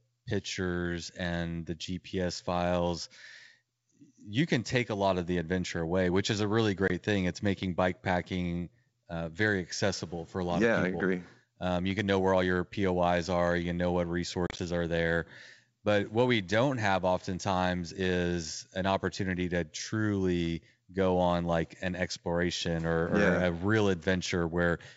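At 6.88 s, just after "which is a really", packet loss on an ADPCM call cuts a hard-edged 20 ms hole, consistent with a couple of lost packets. At 14.47 s, after "can know what" and before "are there", about 70 ms drops out in pieces over 120 ms, the longest gap 30 ms. The waveform shows flat gaps with abrupt edges, and the spectrogram shows blank vertical stripes. When the sound returns, the decoder's predictor and step size are out of step with the sender's, so it comes back slightly distorted and settles within some tens of milliseconds.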